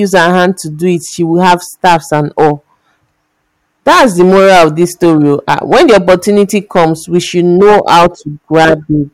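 Hard clipping runs through the whole speech clip. The signal is driven about 15 dB past what the stage can pass, so peaks are sliced flat, giving a harsh fuzz on loud syllables. The waveform shows squared-off tops; the spectrogram shows harmonic smear reaching high frequencies.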